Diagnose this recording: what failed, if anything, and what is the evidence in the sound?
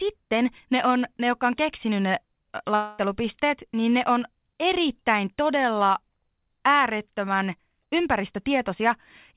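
Network stage: a long network dropout, likely from lost packets. Right after "jotka on keksinyt ne", from 2.75 to 3.01 s, the speech turns into a fading concealment buzz that never reaches silence, then resumes with about 240 ms missing. A local buffer underrun would stall and click rather than skip content.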